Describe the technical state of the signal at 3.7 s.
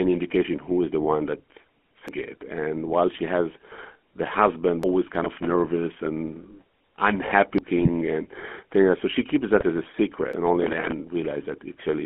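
At 3.7 s, as throughout, GSM full-rate codec damage: a pulse-driven vocal-tract model gives a buzzy, gravelly roughness, unlike a clean 200 Hz–3.4 kHz telephone band-limit, which fits a 13 kbps stream.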